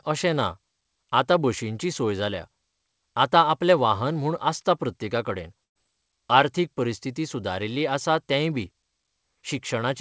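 At 5.64 s, just after "म्हूण आसता प्रत्येका कडेन", a burst of packet loss removes about 120 ms of speech until 5.77 s. The receiver fills a gap of about 114 ms, 110 ms of it silent. Speech then resumes abruptly, with everything above 8 kHz empty from the G.722 call path.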